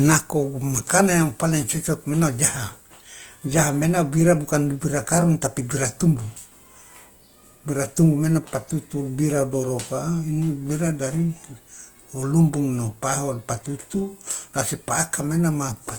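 From start to finish the speech has a grainy, rough texture, with voiced tones turning noisy and the upper range sounding hissy rather than swirling. This is likely Opus compression in its music (CELT) mode. With too few bits, the encoder keeps each band's energy but fills the detail with folded or noise-like content. The full bandwidth survives to about 20.1 kHz, yet the damage is plainly audible, which fits a rate around 24 kbps.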